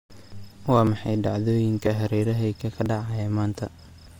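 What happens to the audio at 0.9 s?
At 0.87 s there is a brief skip, audio missing between chunks. A few milliseconds of sound vanish and the two sides are butted together with no gap. The likely cause is a recorder working in 1.0 s chunks, dropping a sliver at each changeover.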